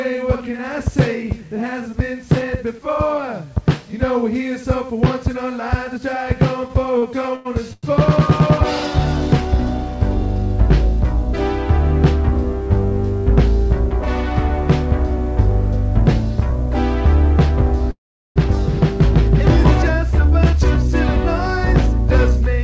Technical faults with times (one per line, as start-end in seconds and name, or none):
6.68-7.85 repeated stalls (stutter)
12.60-16.79 jitter buffer speed-up
17.91-18.38 call audio freeze
20.19-22.18 jitter buffer speed-up